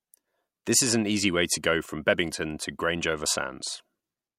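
On listening, nothing in the recording stands out as a technical problem.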